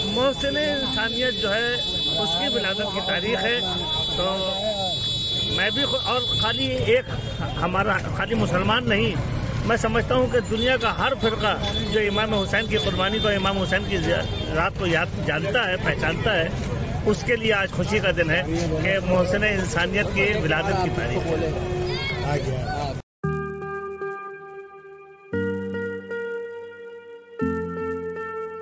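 A steady 100 Hz buzz runs under the audio for its whole length, present only while there is signal and dropping out in silences. It comes from a resampler restarted on every block: each 10 ms block was converted in isolation, which points to a 24 kHz to 16 kHz conversion. The filter lacked true neighbouring samples at every edge, so a small error lands at each block boundary, and at this block length those ticks fuse into a buzz.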